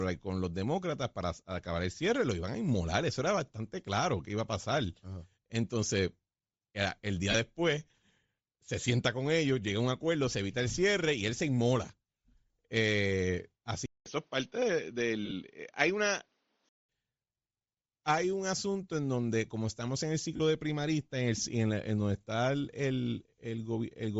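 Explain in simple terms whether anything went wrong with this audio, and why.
Throughout this speech clip there's a breathy, grainy edge on the voice, especially in the higher sounds. That's Bluetooth LC3 compression, the codec Bluetooth LE Audio uses. It chops the sound into tiny 7.5 ms slices, and when data is tight it throws away much of the top end and fills the gap with noise, which is what gives the voice that fizzy texture. Heavy compression is the likely cause of this sound.

There are also short moments where bits of the signal went missing, which are lost LE Audio frames. At 7.31 s about 30 ms drops out, and around 15.25 to 15.32 s roughly 45 ms goes missing in scattered pieces. At 20.36 s, right after "como estamos en el" and before "de primarista", another gap of about 37.5 ms occurs. Each time the decoder covers the hole by repeating the last bit of sound with a random shuffle, so you hear a brief noisy smear instead of clean speech.

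From 13.86 s to 16.89 s the sound gets duller and more muffled, with nothing above about 6.4 kHz. It starts with a short silence of about 200 ms, and a faint new background hiss comes in underneath, though the loudness stays about the same. That pattern is typical of the input switched to a poorer device, most likely a different microphone or a headset's call mode that only passes a narrower range of sound.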